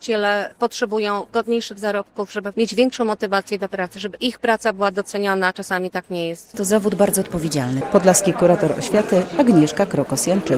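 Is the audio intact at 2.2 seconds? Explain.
Yes, the audio is intact at 2.2 seconds, with no dropout, click, distortion or other fault at that moment.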